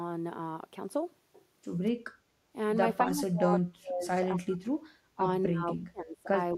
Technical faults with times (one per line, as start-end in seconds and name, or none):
2.10-2.49 background gated by the echo canceller
3.05-4.74 speech suppressed in double talk
5.15-6.28 speech suppressed in double talk